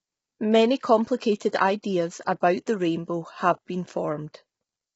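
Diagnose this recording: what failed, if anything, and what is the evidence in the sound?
Throughout, the speech is rough and grainy, with noise between harmonics and nothing above 7.7 kHz. This points to the codec stage, likely heavy low-delay AAC compression, whose short frames blur harmonics at about 16 kbps.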